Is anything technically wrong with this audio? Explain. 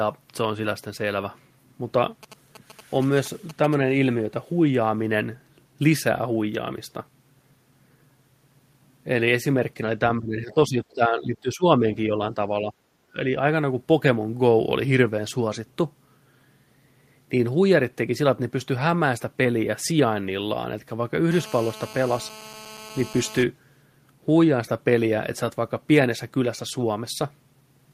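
Yes, there are three kinds of fault.

From 2.23 to 3.75 s there are GSM signalling bursts. A nearby 2G phone is exchanging short groups of radio bursts with the network, not holding a call, and the audio circuitry rectifies that radio energy into sound. The result is a galloping dit-dit-dit of brief 217 Hz buzzes, roughly 20 dB under the speech. Its broken, clustered rhythm is what tells it apart from the continuous buzz of an active call.

Between 10.19 and 13.26 s the speech is repeatedly turned down, at 10.19–10.76, 10.95–11.64, 11.81–12.40, 12.60–12.73 and 13.13–13.26 s. This is most likely speech suppressed in double talk: the far side was talking at the same time, and the echo canceller could not separate this talker from loudspeaker echo, so it attenuated both. The dips reach up to about 15 dB in the first two stretches and are shallower afterwards. The voice sinks in irregular pieces.

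From 21.32 to 23.43 s there is GSM phone buzz. A 2G phone in a call transmits bursts 217 times a second, and the rectified pulses become a hard, raspy buzz rich in harmonics, about 19 dB below the speech. It is nearly steady and has nothing to do with the speech. Mains hum at 50 or 60 Hz sounds smoother and lower, while this buzz has a harsher 217 Hz rasp.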